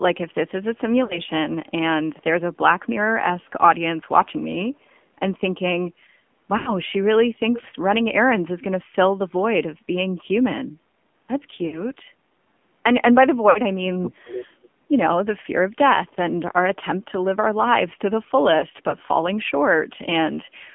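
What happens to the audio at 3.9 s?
At 3.9 s the speech carries AMR narrowband mobile codec damage, present throughout the clip. Content is confined to roughly 150 Hz to 3.4 kHz, and the vocal-tract model with sparse pulse excitation sounds buzzy and synthetic, which fits a low mode near 7.4 kbps.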